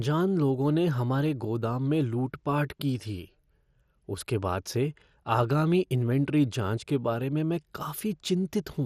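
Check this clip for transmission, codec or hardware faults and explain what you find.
One fault runs through the whole speech clip: MP2 compression damage, plainly audible from start to finish. The sound is dull, with nothing above 15 kHz, and carries a gurgling, granular texture. The likely cause is MPEG Layer II coding at a low rate, consistent with about 64 kbps. Starved of bits, the encoder drops upper sub-bands, lets others switch on and off from frame to frame, and quantises what remains coarsely, much like low-rate digital radio.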